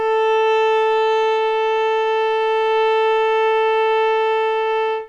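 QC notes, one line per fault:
Throughout: clock drift between sender and receiver. The sender's clock runs roughly 5 percent slow, so the receiver's buffer keeps draining and must be topped up. The waveform shows small discontinuities recurring at uneven spacing, and the spectrogram shows faint vertical seams where material is joined.
0.12 to 4.72 s: repeated timing corrections. To keep pace with the slow sender, the receiver repeatedly repeats short pieces, stretching playback to 96 percent speed and adding roughly 200 ms overall. This is heard, if at all, as slight hiccups or a dragging, unsteady tempo, and shows as duplicated waveform fragments at irregular intervals.
3.80 to 5.03 s: scattered short gaps. Around four packets arrived late, and each hole was filled by continuing the preceding sound, about 30 ms concealed in total, none longer than about 10 ms. They are audible as brief ticks or smears. 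On a spectrogram they appear as thin, horizontally smeared slivers, and on the waveform as short repeated cycles.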